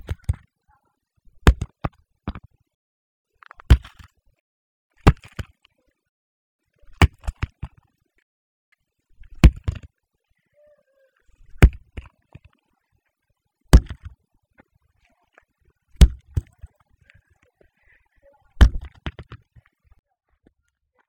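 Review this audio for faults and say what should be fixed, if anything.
No faults are audible, so nothing needs fixing.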